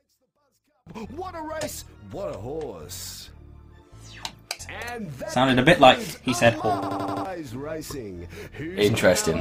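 From 0 to 0.87 s the sound nearly vanishes, sitting about 35 dB down as a faint residue, likely because one channel is inverted and cancels on mono summing. From 6.83 to 7.25 s a system hang loop produces a machine-gun stutter: one 85 ms piece repeats five times at 11.7 Hz, consistent with a 4096-sample buffer cycling while the system froze. Roughly 0.4 s of audio is lost.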